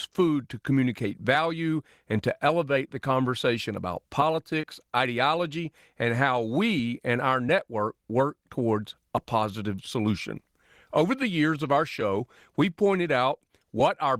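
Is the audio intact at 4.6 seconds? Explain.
No. From 4.61 to 4.65 s, between "elevate the conversation about" and "ideology and how we", there is a short concealed packet loss: about 20 ms of the speech never arrived in time, and the receiver covered the hole by extending the preceding sound before blending back into the real signal. It comes across as a brief smear. Unlike a plain dropout, the gap is filled rather than left silent.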